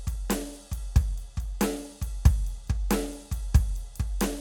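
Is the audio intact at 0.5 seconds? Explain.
Yes, the music plays through 0.5 s without any audible fault.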